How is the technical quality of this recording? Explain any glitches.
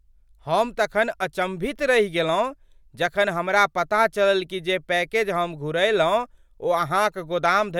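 Nothing in the recording stood out as a technical problem on listening, so there are no glitches to explain.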